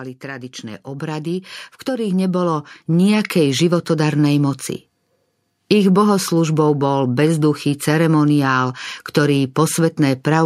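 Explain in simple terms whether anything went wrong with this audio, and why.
Something went wrong: automatic gain rising. The recording system judged the input too quiet and kept turning its own volume up from 0.2 to 3.98 seconds. So the speech and the background noise swell louder together, gradually, over almost four seconds.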